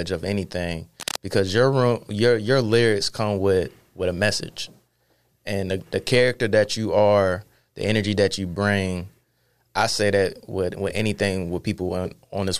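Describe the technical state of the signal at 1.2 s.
At 1.2 s the signal is in the final moments of a burst of cable scratch noise running from 1.00 to 1.21 s, between "of anything" and "because your your your". The likely cause is a worn cable, connector or control being moved, so its contact resistance fluctuates rapidly and injects dense, irregular noise bursts. It sits roughly 10 dB below the speech and is heard as a brief scratching, rustling layer over it.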